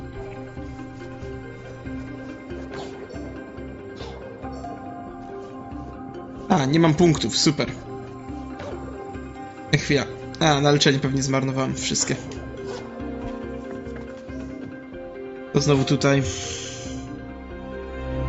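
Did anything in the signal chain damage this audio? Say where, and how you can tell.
No, no stage in the chain has damaged this audio. It passed through call microphone processing and a WebRTC call path with an Opus-style codec, and the traces are a band limit with nothing above 8 kHz and the codec's usual coding noise, normal for that path.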